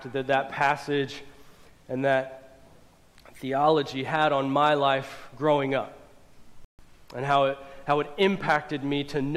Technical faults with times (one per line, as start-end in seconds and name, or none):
6.65-6.79 playback stall